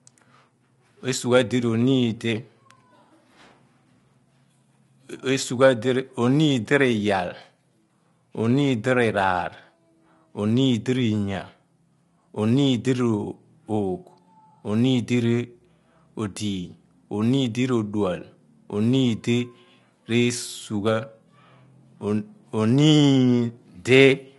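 Throughout the speech, the harmonics sound rough and grainy, with noise filling the gaps between them and nothing above 11.6 kHz. This is likely low-delay AAC compression: short frames resolve pitch poorly, and the plainly audible damage fits a bitrate around 32 kbps.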